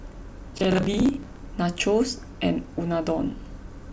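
From 0.53 to 1.46 s there's a stretch of processor overload crackle riding on the speech. The processor couldn't finish its small audio buffers on time, so deadline after deadline slipped, and each miss replayed a scrap of stale audio with hard edges. The grain of the tearing suggests buffers of roughly 15 ms, with something like thirty missed, giving a gritty, broken texture for nearly a second before it clears up.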